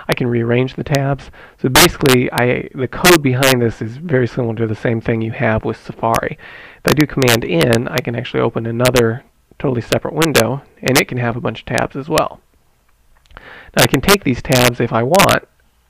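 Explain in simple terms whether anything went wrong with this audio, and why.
Integer overflow runs throughout: the loudest peaks exceed the largest storable number and wrap to the opposite extreme, producing sharp cracks on a small fraction of moments.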